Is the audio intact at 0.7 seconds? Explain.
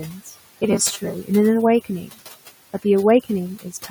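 No. From 0.62 to 1.14 s the speech turns into a rigid, metallic buzz pitched at 200 Hz that still roughly follows the syllables. This is robotic sound from repeated short buffers. The likely cause is audio arriving too late, so the playback kept repeating the last 5 ms of sound while about half of the real audio was skipped. That 5 ms repeat sets the buzz frequency.

Noise suppressor artifacts are also present at this moment. The room noise sits about 18 dB below the speech, and the suppressor pulls it down by about 16 dB. The suppressor lowers frequency bands it judges to be steady noise, frame by frame, so the background pumps with the speech.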